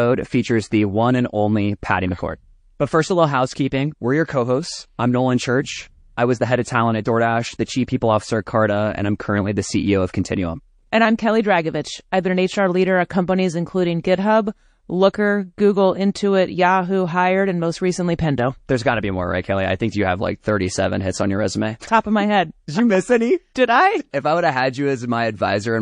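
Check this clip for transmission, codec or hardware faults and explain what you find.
The recording carries one codec fault that runs the whole way through. MP3 compression, from start to finish: the damage is plainly audible and is likely MP3 coding at a low bitrate, which fits roughly 40 kbps. Starved of bits, the encoder removes the treble above a fixed point and drops weak spectral lines that flicker in and out between frames. The speech therefore sounds dull and watery, with swirling, metallic chirps on s sounds and softened consonant onsets.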